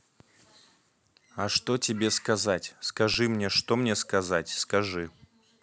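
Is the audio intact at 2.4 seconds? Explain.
Yes, at 2.4 seconds the speech runs through cleanly, with no dropout, click, distortion or other disturbance to be heard at that moment.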